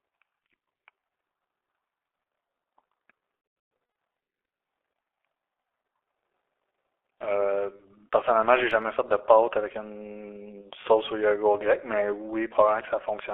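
Throughout, the G.723.1 codec leaves the speech muffled and hoarse. Nothing passes outside a 300 Hz to 3.4 kHz telephone band, consonants blur, and the coarse, slowly updated voice model causes heavy damage, which fits a rate of about 6.3 kbit/s.

From 3.35 to 3.95 s, VoIP packet loss concealed by the speech codec removes about 390 ms of audio scattered over 600 ms, with the longest gap 120 ms. The decoder stretches the last sound into a fading buzzy tone or coloured noise, and the speech stays weak as frames recover.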